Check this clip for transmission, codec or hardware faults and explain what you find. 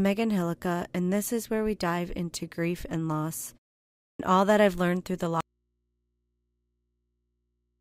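Two faults are audible in this speech clip, one at the onset of a phrase and one that runs to the end.

At 4.1 s, after a 0.6 s pause, there is a clipped start after a pause: the output device apparently slept and missed about 95 ms, so speech begins abruptly without its first sounds, unlike a fade-in.

From 5.41 s to the end, there is an audio dropout to a faint residue. Speech cuts off mid-flow, leaving mains hum about 50 dB down, likely from a lost input while the path stayed live. The change is abrupt, unlike a pause or a fade.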